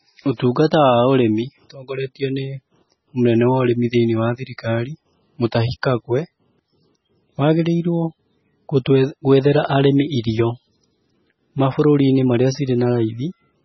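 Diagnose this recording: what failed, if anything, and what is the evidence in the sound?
The failure sits at the codec stage and runs through the whole speech clip. Nothing is present above 5.9 kHz, a hard treble ceiling rather than a gradual roll-off, and the speech has a heavily watery, swirling texture. This is likely MP3 compression at a very low bitrate, in the region of 16 kbps. Starved of bits, the encoder cuts the top band outright and drops weak frequency lines that flicker on and off between frames.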